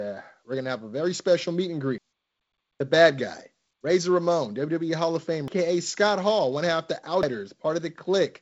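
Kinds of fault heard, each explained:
Audio missing between chunks: The sound jumps forward at 1.98, 5.48 and 7.23 seconds. Each jump drops roughly a third of a second. The two sides join with no silence between them. The likely cause is a recorder or processor that handles the audio in 2-second chunks and loses a piece each time one chunk closes and the next opens. The G.722 wideband coding, which cuts off near 7.7 kHz, plays no part in these skips.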